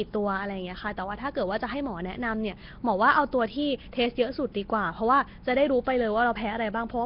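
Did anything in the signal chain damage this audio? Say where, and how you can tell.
Yes. The damage happens at the codec stage and runs through the whole speech clip. There is a rough, hissy halo around the speech and a smeared, underwater quality. Nothing sounds above about 5.3 kHz. That points to Nellymoser compression, likely from a Nellymoser Asao encoder at a low rate, which fits about 22 kbps. It codes short blocks with very few bits. Weak bands get no bits at all and are filled with noise, so the damage is heavy.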